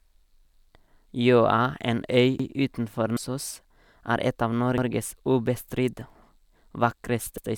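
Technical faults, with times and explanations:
2.40 s, 4.78 s and 7.38 s: overlapping chunks. The speech was handled in blocks about 2.5 s long, each starting 100 ms before the previous one finished. That 100 ms plays twice at every join, so a stutter repeats at a steady interval, the second just after "er et av".
3.13 to 3.19 s: damaged data in a compressed stream. Corrupted bytes made the decoder misread the frames there and lose sync while it searched for the next valid header. This comes through as a brief glitch lasting about 50 ms.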